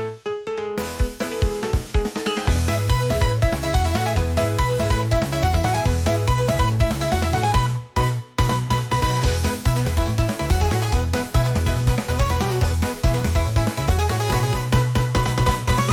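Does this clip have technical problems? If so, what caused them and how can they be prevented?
Yes. A doubled audio track starts abruptly at 14.30 s and lasts to the end. A full-band copy trails around 200 ms behind at roughly equal level, with no decay or room colour. It is likely a second capture through a slower path, or two out-of-step copies in an edit. To prevent it, record through a single monitored input path and remove overlapping duplicate regions before export.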